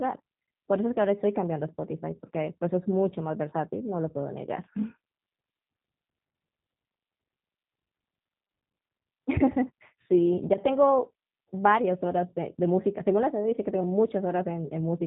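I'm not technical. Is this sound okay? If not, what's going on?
No, not quite. The whole clip has gone through the G.729 codec, a compression scheme built for phone and internet calls. It rebuilds the speech from a rough model of the voice instead of keeping the actual sound, so it comes out slightly rough and artificial-sounding, and the damage is plainly audible. Everything above about 3.8 kHz is also cut off, which is why it sounds muffled and thin, like an old phone line.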